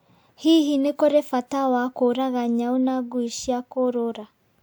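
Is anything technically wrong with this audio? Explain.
No, nothing technically wrong can be heard in this speech.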